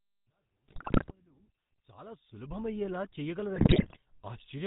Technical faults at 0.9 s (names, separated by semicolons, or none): GSM full-rate codec; GSM bit errors